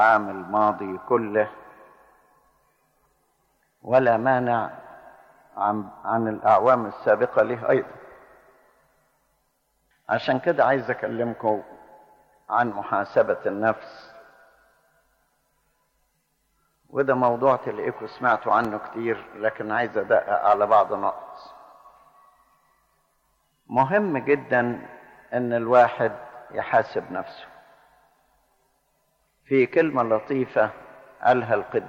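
A single loud pop, a sharp thump a few decibels above the audio, sounds from 18.65 to 18.67 s, with the audio continuing beneath it, likely a voltage step from a plug, switch or static discharge.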